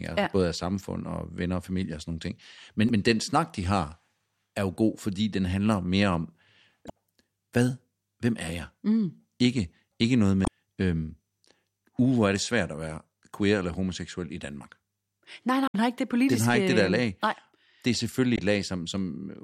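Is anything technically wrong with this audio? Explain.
Yes. Damaged data in a compressed stream breaks the speech at 2.86–2.91, 6.86–6.90, 10.44–10.48, 15.66–15.75 and 18.35–18.39 s. Corrupted frames make the decoder lose sync, producing brief chirps or blips.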